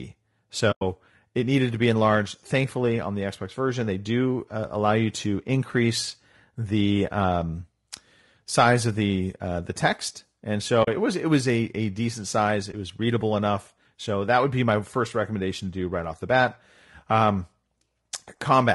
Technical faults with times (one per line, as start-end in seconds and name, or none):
0.00-18.75 low-delay AAC compression
0.71-0.82 AAC frame loss with muting
10.83-10.88 AAC frame loss with muting
12.71-12.74 AAC frame loss with muting